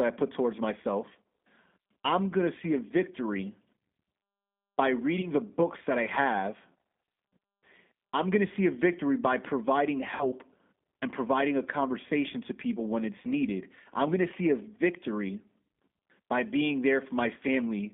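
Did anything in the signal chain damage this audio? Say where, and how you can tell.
Yes. At the codec stage, the whole clip shows plainly audible G.729 codec damage. Speech is confined to a 150 Hz to 3.6 kHz band and sounds rough and synthetic. That fits 8 kbit/s G.729A rebuilding each frame from a vocal tract filter, pitch predictor and sparse pulses.

On the network side, VoIP packet loss concealed by the speech codec is heard at 5.21–5.30 s, 10.16–10.26 s and 15.72–15.74 s. The lost spans of 20, 40 and 20 ms point to one, two and one dropped packets. The decoder extrapolated its last pitch and filter at falling gain, and the first two disturbances outlast their gaps while the decoder recovers.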